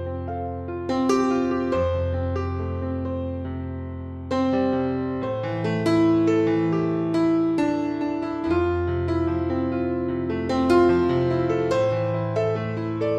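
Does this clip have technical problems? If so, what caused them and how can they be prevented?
No, there are no technical problems in this clip.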